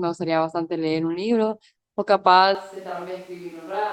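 Switch to a distant microphone from 2.55 s onward: speech abruptly turns roomy and about 10 dB quieter, likely because the close microphone dropped out.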